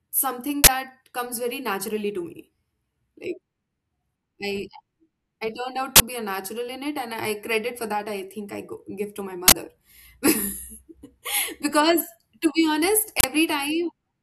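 Speech, hit by an uninitialised buffer. Four loud 40 ms bursts of digital noise occur: 0.64–0.68 s, before "comes very naturally to"; 5.96–6.00 s, after "I turned out"; 9.48–9.52 s; and 13.20–13.24 s, after "to be honest". Each block played before audio filled it. Leftover memory came out as sound.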